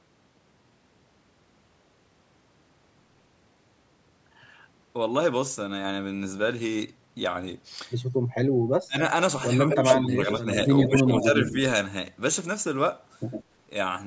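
At 8.87 s the speech drops sharply for about a tenth of a second, by roughly 30 dB. This is speech suppressed in double talk. Both ends were likely talking at once, and the echo canceller turned everything down. Shallower dips of about 10 dB follow at 9.66 s, 10.07 s and 10.86 s. The last one lasts until 11.33 s, so the voice sags for around 0.3 s.

From 9.7 s to 10.65 s a second copy of the voice trails the first by 104 ms, at about the same level. This is an echo leak. It is likely a loudspeaker at the far end whose echo canceller let some of its own pickup slip through. The copy returns from 10.82 s to 11.24 s, about 5 dB lower. It returns again from 13.31 s to 13.44 s, about 15 dB down, as a faint scrap.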